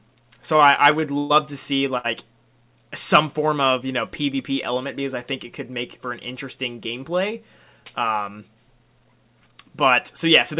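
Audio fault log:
0.56–1.32 s, repeated stalls (stutter): across this stretch, just before "to see", the jitter buffer ran dry four times because packets reached the receiver late. Each time, the receiver kept the last sound going until audio resumed, filling about 170 ms in total, roughly a fifth of the span, with the longest hold about 120 ms. Nothing is lost, but the held sounds make the passage drag and stutter, the longer fills fading.
1.98–2.06 s, short stall from a late packet: right after "to see", one packet missed its playout time and the buffer emptied. The receiver stretched the preceding sound for about 65 ms until the packet turned up, then resumed exactly where it had paused, so no audio is missing. What you hear is a single sound held slightly too long, with a faint buzzy, dipping quality, as the playout delay jumps by the same 65 ms.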